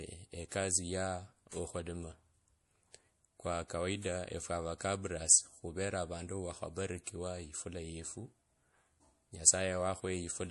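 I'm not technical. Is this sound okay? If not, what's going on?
No. Throughout the speech it sounds clearly watery and dull, with nothing above about 11.4 kHz, likely from heavy MP3 compression discarding detail to save space.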